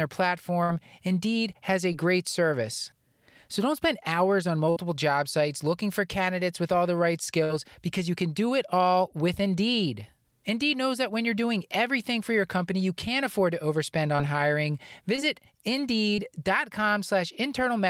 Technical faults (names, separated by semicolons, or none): burst of packet loss; short concealed packet loss